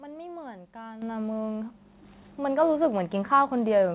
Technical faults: microphone volume stepped up

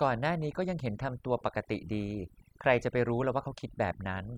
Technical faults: overdone noise removal

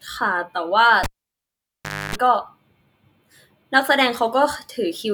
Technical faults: cable pulled and plugged in

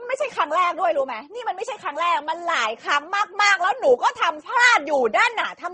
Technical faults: transcoding between lossy codecs

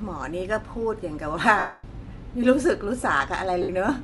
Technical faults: Bluetooth LC3 compression; lost LE Audio frames

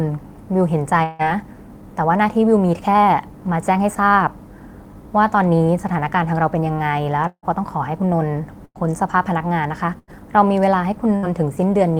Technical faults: long network dropout; jitter buffer speed-up; burst of packet loss

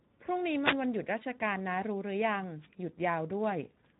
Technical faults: Speex codec

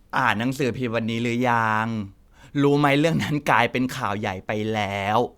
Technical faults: none

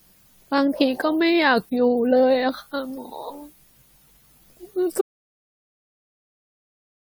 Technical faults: audio dropout to silence

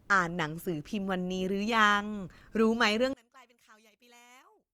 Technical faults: one channel inverted

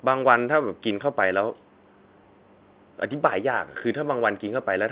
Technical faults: none

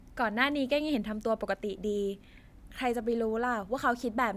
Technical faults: none

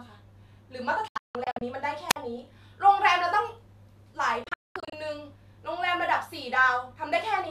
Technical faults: digital broadcast dropout; wireless microphone squelch dropout

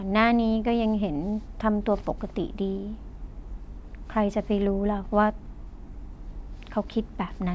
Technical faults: none

